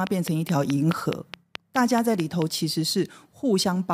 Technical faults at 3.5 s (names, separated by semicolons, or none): none